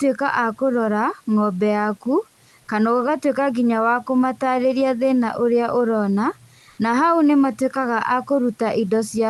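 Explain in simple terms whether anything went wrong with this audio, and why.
One short fault stands out, from 6.69 to 6.77 s, just before "na hau nĩ": comfort noise in place of the background. For about 80 ms in a pause, the real room sound is swapped for a smooth, even hiss at nearly the same loudness. The likely cause is the call's sender going quiet when it detected no speech, with the receiver filling the gap with made-up noise that roughly matches the background.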